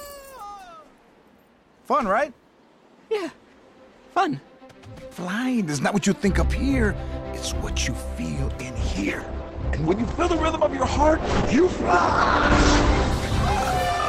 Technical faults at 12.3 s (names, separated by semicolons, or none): call bitrate drop